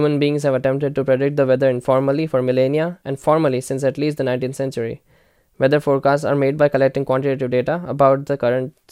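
No technical faults can be heard anywhere in the recording.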